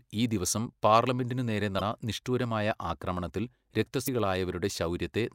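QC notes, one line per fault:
1.77–1.81 s and 4.04–4.08 s, damaged data in a compressed stream: two short blips of about 40 ms break into the speech where corrupted bytes in the encoded stream made the decoder misread frames, lose sync and resume at the next valid frame header.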